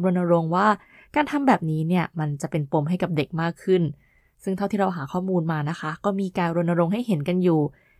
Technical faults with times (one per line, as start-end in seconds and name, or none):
none